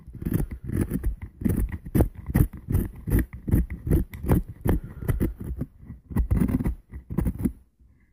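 No technical faults are audible.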